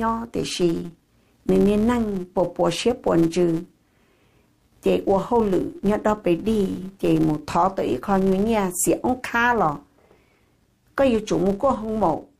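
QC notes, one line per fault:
throughout: filter restarted on every block, clearing its state at each start, which fits 256-sample blocks; the start-up ticks form a 172 Hz buzz following the level.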